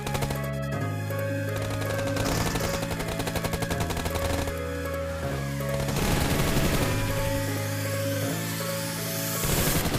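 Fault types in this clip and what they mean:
Channel delay (doubling): one side runs about 85 ms late, which fits a 4096-sample buffer, so the mono mix carries a same-level slap echo throughout.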